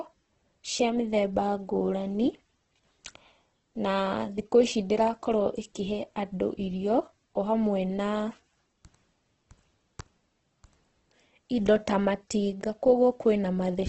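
Throughout, the speech sounds grainy and rough, likely from heavy Opus compression at a low bitrate near 12 kbps; a spectrogram shows band-filled noise and nothing above 8.2 kHz.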